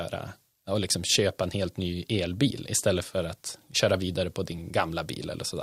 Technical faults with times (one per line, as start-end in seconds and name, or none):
none